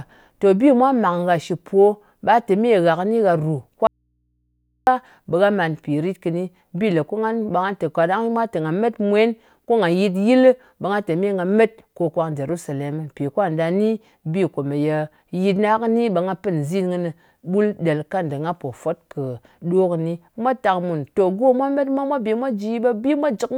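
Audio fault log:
3.87–4.87 s, audio dropout to a faint residue: Just after "kɨni gha rù" the speech stops dead for about one second. It does not fade or pause. Only a low mains hum remains, about 50 dB below the normal speech level. The speech then returns just as abruptly. The likely cause is a brief break in the signal feed while the later stages stayed live, so the open input picked up hum.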